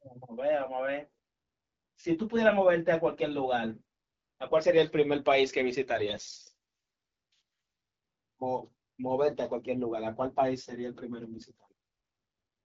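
From 5.96 to 6.42 s the speech turns hoarse and gargly. These are AMR bit errors: roughly one in seven weakly protected bits flipped, misplacing excitation pulses and skewing pitch, gain and spectral detail. Unlike packet loss, nothing drops out, and pitch and loudness hold.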